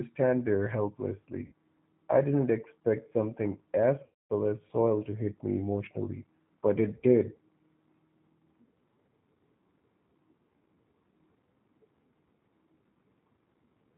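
G.729 codec throughout: the speech is rebuilt at about 8 kbit/s from a vocal tract filter, pitch predictor and sparse pulses, so it sounds rough, synthetic and cut off above 4 kHz. VoIP packet loss concealed by the speech codec at 1.46 to 1.52 s and 4.06 to 4.32 s: the decoder stretched its last pitch and filter over 60 ms and 240 ms of missing audio, giving a buzzy tone or coloured noise that fades, before the speech recovers, weak or distorted at first.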